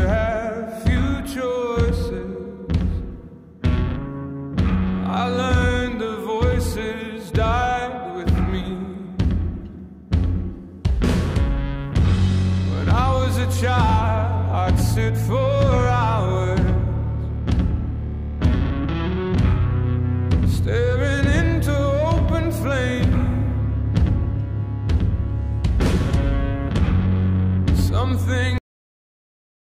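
At 28.58 s the audio shows a cut-off end: the final buffers were never written, so the sound halts mid-event rather than fading. The waveform drops instantly to a flat, silent line, and the spectrogram turns abruptly black with no decaying tail through the last second.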